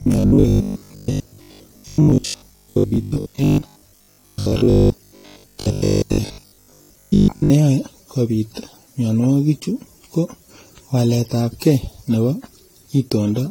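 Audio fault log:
throughout: generation loss. The speech sounds swirly, hollow and smeared, with blurred attacks. The likely cause is about seven rounds of lossy AAC encoding.
0.02 to 7.5 s: robotic sound from repeated short buffers. A rigid metallic 50 Hz buzz runs through the speech. This is likely from 20 ms buffers replayed for most of that stretch.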